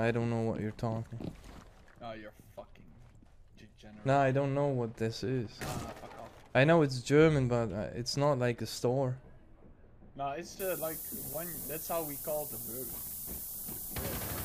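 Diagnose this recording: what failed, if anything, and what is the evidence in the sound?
Low bit depth with noise shaping from 10.6 s to the end at 14.45 s, a sample-format conversion fault. The audio is requantised to about 6 bits, and error feedback pushes the rounding noise upward, leaving a thin hiss that climbs steeply toward the top of the band and sits nearly as loud as the signal.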